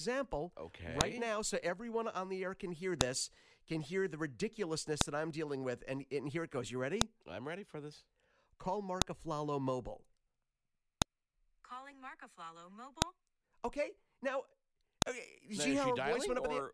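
Sharp, loud clicks cut through the speech at 1.01, 3.01, 5.01, 7.01, 9.02, 11.02, 13.02 and 15.02 s, each a brief snap that lands regardless of what the talker is doing. They recur every 2 s, which points to the file header played as audio: the stream was built from 2-second WAV pieces joined without stripping their headers. Those few dozen header bytes get decoded as sample values, producing a burst of arbitrary amplitude at each join.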